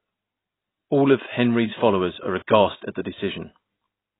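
From start to finish the speech carries heavy damage of the kind AAC compression leaves at a very low bitrate, likely AAC-LC working at a rate that points to around 16 kbps. Nothing survives above about 3.9 kHz, so the sound is dull and boxy. With so few bits per frame, many spectral lines are quantised away, leaving a smeared, warbling texture on sustained sounds and a fizzy, hollow edge where sibilants should be.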